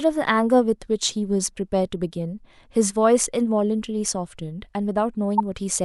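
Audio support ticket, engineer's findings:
Corrupt frame decoded, 5.38–5.40 s: loud chirp, squeak, blip or noise burst, about -10 dBFS, roughly two frames long. Decoder played a damaged bitstream, putting energy at wrong frequencies instead of leaving a dropout's silence.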